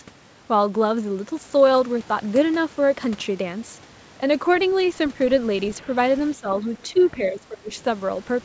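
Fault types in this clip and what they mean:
Speech suppressed in double talk: late in the clip the speech dips three times, briefly, from a slight fade to about 20 dB down, likely an echo canceller muting the talker during crosstalk; uneven partial dips, not clean silent gaps, separate it from packet loss.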